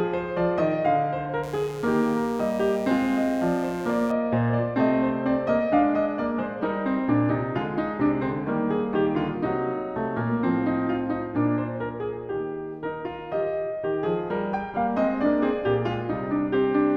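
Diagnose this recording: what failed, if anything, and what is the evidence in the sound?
A steady, raspy buzz sits under the music from 1.43 s to 4.12 s, roughly 20 dB below it, then stops. This is mains buzz entering at the analogue wiring stage. Its fundamental is 60 Hz, with a dense stack of harmonics reaching up into the kilohertz range. Those harmonics come from sharp switching spikes, twice per mains cycle, from a dimmer, rectifier or unshielded run coupling into the signal path.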